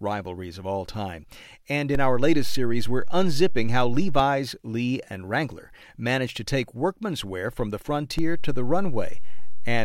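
At 1.95 s a DC step shifts the waveform's zero line by about -18 dBFS. A low thump marks it. The offset holds until 4.2 s, then drops back with another thump. After "workman's wear from the", at 8.19 s, it steps again and stays to the end.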